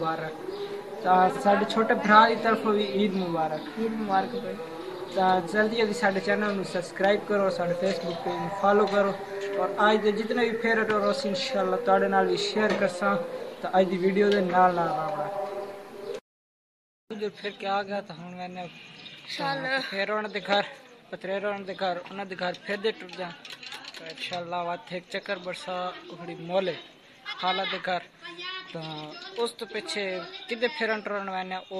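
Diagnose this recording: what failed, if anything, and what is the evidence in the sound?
Frames out of order, at the network or packet-reordering stage ahead of the decoder. Short garbled flutters occur at 1.30–1.41 s, 4.93–5.08 s, 7.19–7.25 s and 27.25–27.41 s. In each, two adjacent blocks of audio were decoded in swapped order, so the halves play exchanged without any loss of time. The swapped blocks are 23.2, 46.4 and 69.7 ms long, multiples that fit a frame of about 23 ms.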